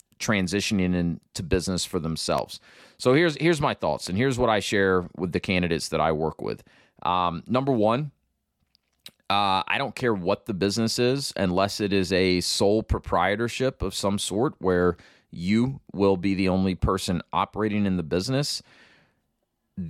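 A sudden voltage pulse entering the chain, likely from a switch, plug or static discharge, produces two loud pops in this speech. The first lands at 2.38 s, just after "transitioning into business for", as a single sharp click peaking well above the speech, around 10 dB louder. The second, at 4.07 s between "here's here's my thoughts" and "and here's what I", is softer, about 5 dB over the speech, with talking continuing underneath both.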